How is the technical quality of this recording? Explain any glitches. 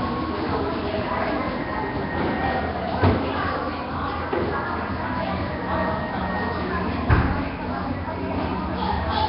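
The technical quality is poor, with heavy coding damage throughout. Nellymoser compression runs the whole length: the sound carries a rough, hissy halo and a smeared, underwater blur, with nothing above 5.3 kHz. The likely cause is the Flash-era Nellymoser Asao codec at a rate near 22 kbps, which starves quiet bands of bits and fills them with noise.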